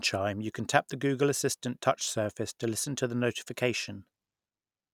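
No technical faults can be heard anywhere in it.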